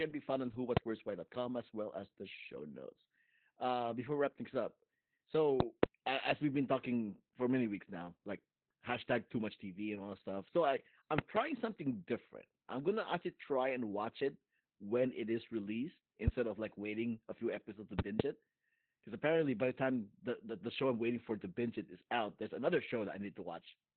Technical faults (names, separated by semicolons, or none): Opus voice compression